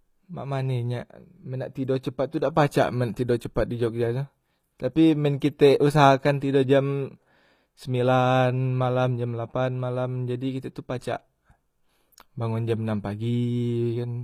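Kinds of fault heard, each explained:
HE-AAC compression: The treble sounds rebuilt rather than captured, from start to finish of the speech clip. The likely cause is HE-AAC, which codes only the lower spectrum and fills the top by copying lower bands upward under a coarse envelope. The damage is plainly audible. The highs stay bright, but their harmonics do not line up with the range below. S sounds turn gritty and lispy. The result fits a low bitrate of around 24 kbps.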